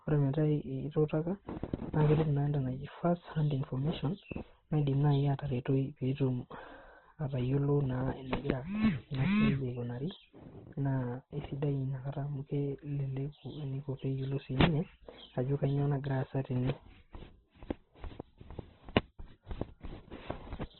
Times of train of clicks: none

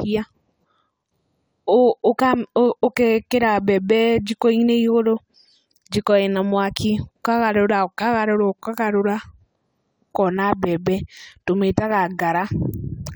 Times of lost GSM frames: none

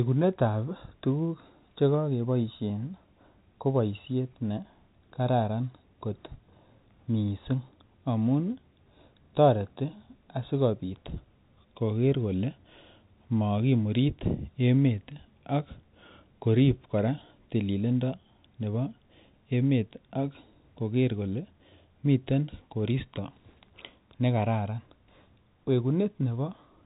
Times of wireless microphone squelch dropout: none

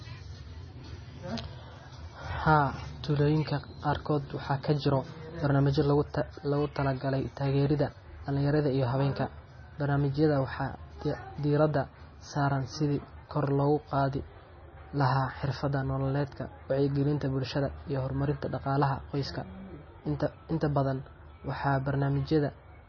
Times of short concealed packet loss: none

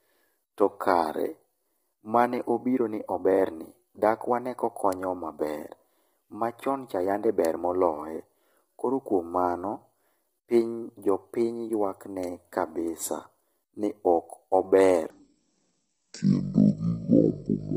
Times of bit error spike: 4.93, 7.45, 12.23

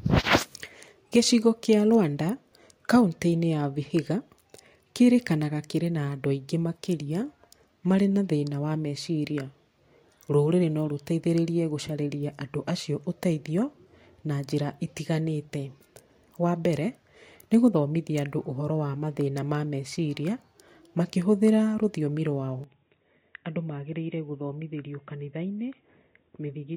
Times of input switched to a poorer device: 22.64-26.76

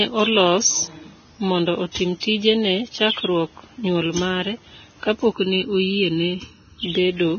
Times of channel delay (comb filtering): 5.33-6.83

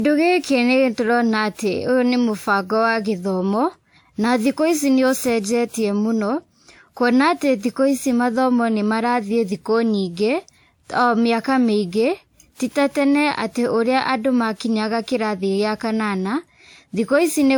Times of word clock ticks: none

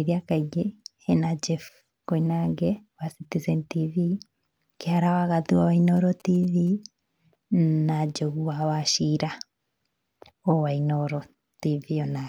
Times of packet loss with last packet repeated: none

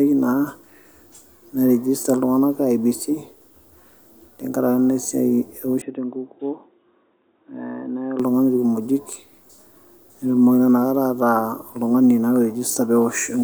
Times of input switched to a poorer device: 5.82-8.20

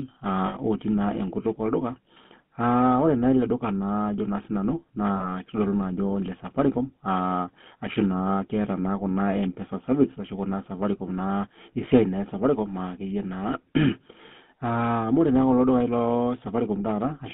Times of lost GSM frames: 0.46-0.56, 5.16-5.26

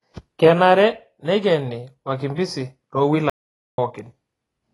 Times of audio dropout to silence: 3.30-3.78

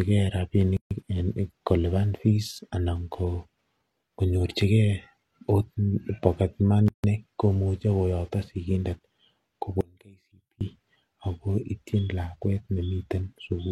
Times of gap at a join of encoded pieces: 0.77-0.91, 6.88-7.04

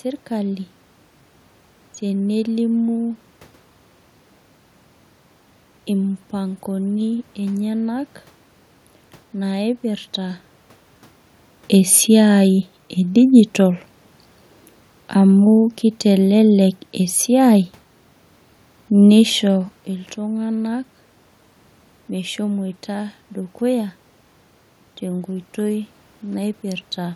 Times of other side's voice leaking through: none

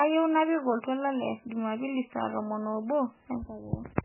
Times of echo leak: none

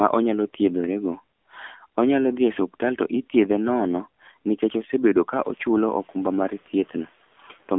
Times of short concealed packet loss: none

